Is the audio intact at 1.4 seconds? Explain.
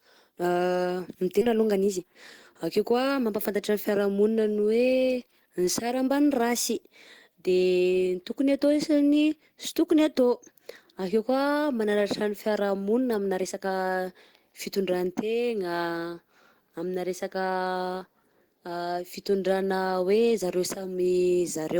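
No. At 1.41 to 1.43 s the speech lurches forward: the sound before the jump runs straight into sound from later on, with no silence or fill between them, so roughly 0.7 s of speech is simply gone. This is a skip ahead. That stretch was discarded, either lost in transit or dropped when the jitter buffer overflowed, while the following audio was already queued. Playback resumed from the queued audio, shortening the delay by about the same amount.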